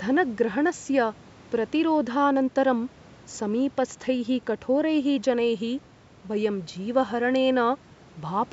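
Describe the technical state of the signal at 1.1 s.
At 1.1 s the speech signal is intact, with only the ordinary bass roll-off and 8 kHz band limit of call microphone processing and a low bed of room noise sitting about 28 dB below the speech.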